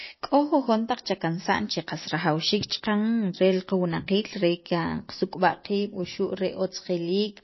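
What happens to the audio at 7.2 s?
MP3 compression is present at 7.2 s, as it is throughout the speech. The encoder has likely been starved of bits, which fits a rate around 24 kbps. It removes everything above 5.8 kHz and zeroes weak frequency lines that flicker on and off from frame to frame. The result at this moment is a dull, band-limited top end, a plainly audible watery, swirly texture, and softened, smeared consonant onsets.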